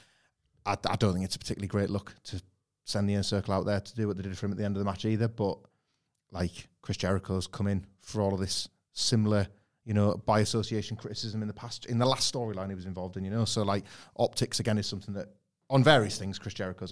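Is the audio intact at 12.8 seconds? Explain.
Yes, the speech at 12.8 seconds plays through cleanly, with no fault audible at that point.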